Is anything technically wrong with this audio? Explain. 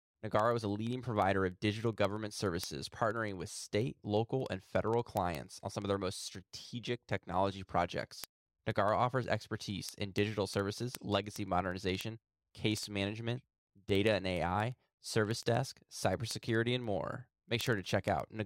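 Yes, there are word clock ticks running from 0.10 s to 18.43 s, roughly every 50 ms. The receiving device's clock isn't locked to the sender's and is off by around 400 ppm, so each slip drops or repeats a single sample. That puts a few hundred sharp, uneven ticks under the speech.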